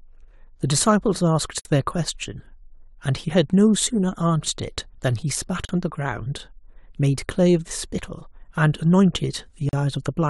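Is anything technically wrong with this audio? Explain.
Yes. The speech was encoded in separate pieces about 4 s long and joined untrimmed, leaving gaps at a join of encoded pieces at 1.60 to 1.65 s (55 ms), 5.65 to 5.69 s and 9.69 to 9.73 s (40 ms each). Each join keeps encoder start delay and last-frame padding, so the sound drops into a brief silence with smeared edges, then resumes exactly where it stopped.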